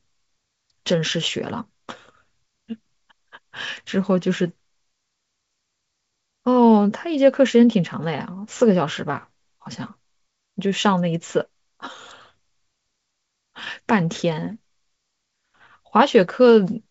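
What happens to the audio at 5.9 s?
Nothing goes wrong at 5.9 s; the speech carries on intact through that moment, passing through G.722 wideband telephone coding at 64 kbit/s with no more than faint coding damage.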